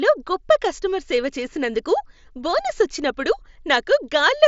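No technical faults can be heard in this speech clip. It has passed through a Bluetooth mSBC headset link, so nothing reaches above about 7.7 kHz, and there is a light graininess on the louder sounds.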